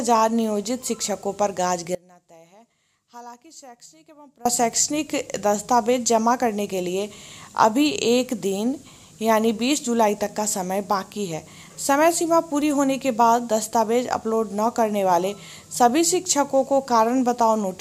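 At 1.95 s the sound drops away abruptly and stays gone until 4.45 s, about 2.5 s in all. The gap isn't silent: a faint trace of the signal carries on underneath, roughly 25 dB below its normal level, before full level snaps back. This is an audio dropout to a faint residue, likely caused by a brief interruption of the wanted signal while the path after the break stayed live and kept passing a weak leak.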